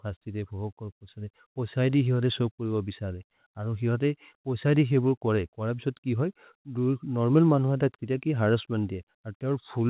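No technical faults are audible.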